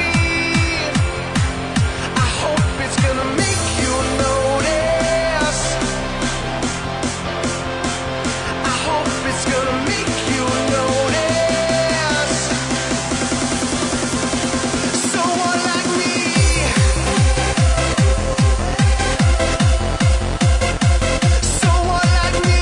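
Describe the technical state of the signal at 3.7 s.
At 3.7 s the signal is intact, with no dropout, click, distortion or other fault to be heard at that point.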